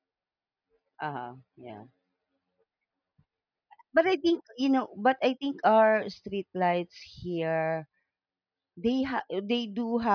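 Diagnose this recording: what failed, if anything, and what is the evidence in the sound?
Nothing failed in this recording, and the sound offers no evidence of a fault at any stage.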